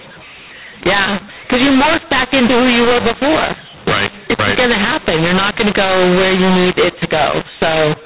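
From start to finish, the speech carries a mu-law and A-law mix-up. The telephone audio was coded with mu-law but decoded as A-law. The two logarithmic scales map the 8-bit codes to different levels, so samples come back at the wrong size. Some are too loud, others too quiet. The quietest ones are pushed well above silence. The speech sounds harsh and gritty, and pauses fill with hiss. The G.711 band limit still cuts everything above 4 kHz.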